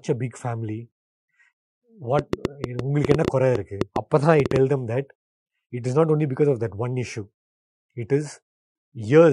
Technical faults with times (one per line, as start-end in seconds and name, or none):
2.19-4.57 train of clicks